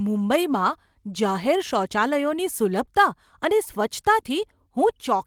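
This speech clip has one short concealed packet loss from 2.85 to 2.89 s, just after "જાહેર શૌચાલયોની". About 20 ms of audio never arrived, and the receiver bridged the gap by extending the preceding sound before crossfading back, which is heard as a brief smear or wobble. On a spectrogram the harmonics or noise band run unnaturally flat across that slot. In the waveform a short stretch continues the previous sound before the real signal resumes.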